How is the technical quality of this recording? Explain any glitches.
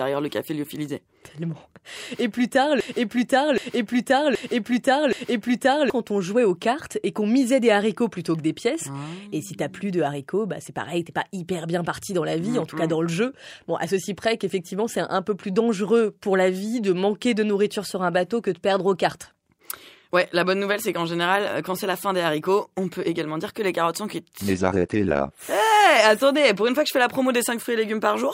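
The recording has one glitch. After "plus tard", from 2.81 to 5.9 s, a broken-record loop repeats a 0.77 s piece four times. The stream likely stalled. The audio it should have played is lost.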